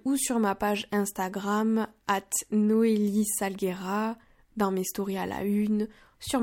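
No audible technical faults occur anywhere in this speech.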